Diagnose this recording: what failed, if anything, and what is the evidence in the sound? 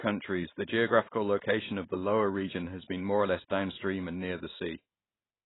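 The codec stage is the problem, and the damage runs through the whole speech clip. Nothing is heard above about 3.9 kHz, so the sound is dull and boxed-in. Sibilants are thin and fizzy, and sustained sounds warble. The likely cause is heavy AAC compression, consistent with AAC-LC at around 16 kbps. The encoder had too few bits, so it cut the top band and coarsely quantised what remained. That leaves smeared, hollow spectral detail.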